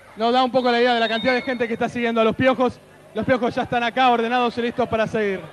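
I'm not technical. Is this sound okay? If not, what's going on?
Yes, the sound is fine technically: it has the ordinary character of audio sent over an internet call, with nothing going wrong along the way.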